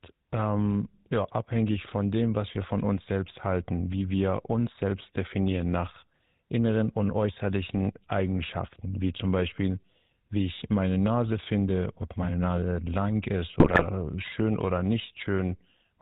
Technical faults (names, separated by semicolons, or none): GSM full-rate codec; GSM bit errors